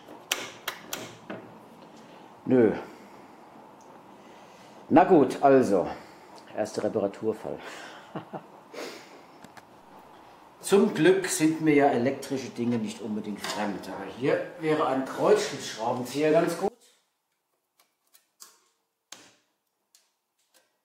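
From 16.68 s to the end of the clip the centre of the sound collapses, dropping by about 24 dB and leaving only a faint residue. This is likely one channel inverted: with one side's polarity flipped, everything common to both channels cancels when they are summed to mono. Unlike a dropout or a simple gain drop, the loss is not uniform. The centred content vanishes while the difference between the channels lingers as a faint copy.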